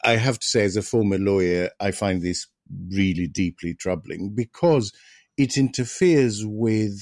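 No technical fault can be heard in this recorded speech, and the signal stays steady and uninterrupted throughout.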